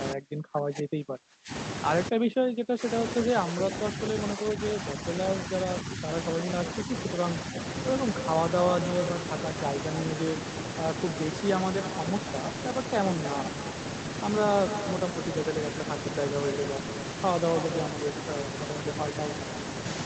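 From 0.14 to 1.52 s the speech sinks sharply, by up to about 35 dB. It happens again from 2.1 to 6.03 s, with patches dropping by about 30 dB. A short, shallow dip of about 5 dB follows from 6.85 to 7.2 s. This is speech suppressed in double talk. The far side was likely talking at the same time. The echo canceller mistook the near talker for echo and turned it down.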